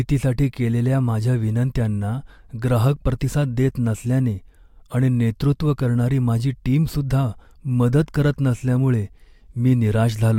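No technical faults can be heard anywhere in this speech recording. There is no moment that needs a timestamp.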